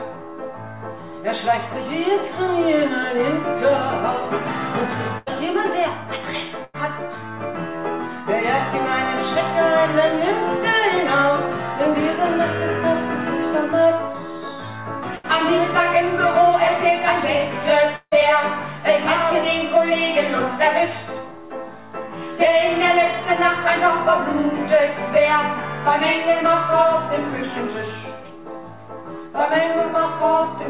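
Audio carried over a narrowband call path, with nothing above 4 kHz, consistent with G.711 mu-law at 64 kbps, shows three bursts of packet loss, at 5.18 to 5.28 s, 6.64 to 6.76 s and 15.16 to 15.26 s. In each, the receiver stretches the last sound for about 80 to 90 ms, as a held buzz or a fading hiss. The audio then picks up again with roughly 80 to 100 ms skipped. Because the concealment covers the whole gap, no true silence appears. That is what separates these bursts from the longer event at 17.96 to 18.14 s, likely a long network dropout. There the concealed tail runs on for about 160 ms and decays until it dies away completely, leaving about 60 ms of silence before the audio returns. About 160 ms of material is missing from that point.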